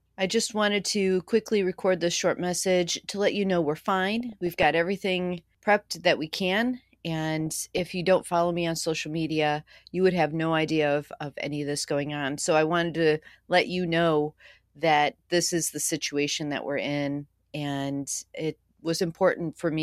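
DAB burbling at 4.16–4.65 s (after "let you know we're"), 7.40–8.34 s (before "me on social media") and 13.12–13.28 s (after "I wanted"): residual bit errors, around 0.3–0.5 percent, corrupt MP2 sub-band samples and levels, giving short blips of noise and jumps in level over the speech.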